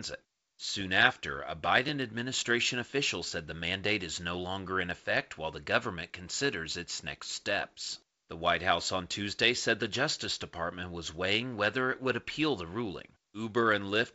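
No technical faults are audible.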